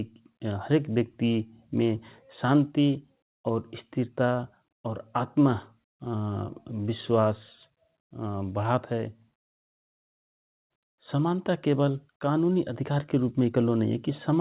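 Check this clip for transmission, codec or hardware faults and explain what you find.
A long network dropout runs from 9.77 to 10.73 s, likely lost packets: the last sound smears and fades, then near-silence for about 0.9 s, and speech resumes missing that stretch, still band-limited to 4 kHz by the G.711 call path.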